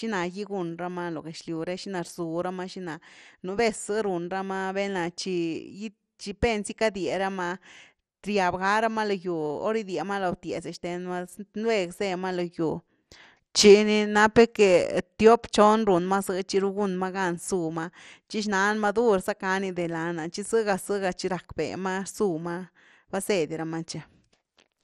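Throughout, the speech sounds dull and gurgly, with the upper bands missing. This fits likely MP2 compression at a low bitrate near 64 kbps, which leaves too few bits for the upper sub-bands.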